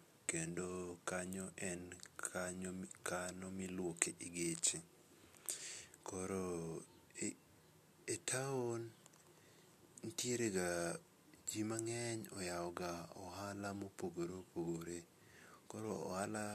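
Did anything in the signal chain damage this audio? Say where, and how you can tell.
No, I can't hear any damage from the signal chain in this speech recording. None of the stages it passed through has left anything audible of its own.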